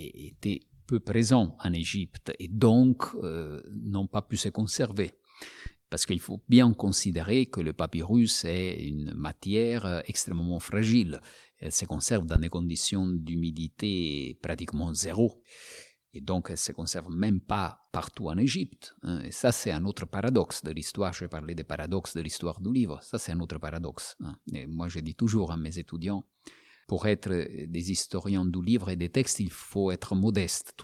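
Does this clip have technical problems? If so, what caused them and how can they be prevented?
Yes. A phantom power thump at 12.36–12.80 s, between "se conserve dans" and "d'humidité pratiquement zéro", comes from a supply step on a live input and decays over 100 ms. Mute the channel before switching phantom power.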